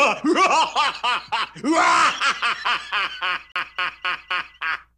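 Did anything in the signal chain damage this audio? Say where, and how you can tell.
Yes. From 3.52 s to 4.56 s the audio locks into a rapid, even stutter: the same 0.26 s slice plays four times in a row, each repeat separated by a brief mute. That is a CD stuck on one turn, a playback-stage fault. A scratch knocks the laser back one track at the same point on every rotation, so the player keeps rereading one revolution's worth of audio and drops out momentarily at each jump.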